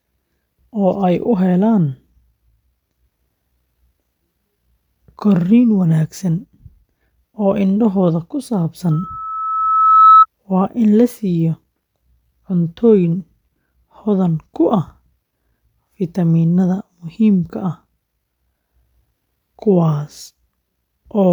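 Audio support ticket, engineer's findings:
Loudspeaker feedback squeal, 8.91–10.26 s. Lone 1.3 kHz tone builds over roughly a second to about 10 dB above speech. Mic hears its own loudspeaker; loop gain exceeds one there. Spectrogram: single bright horizontal line. Waveform: swelling sinusoidal envelope.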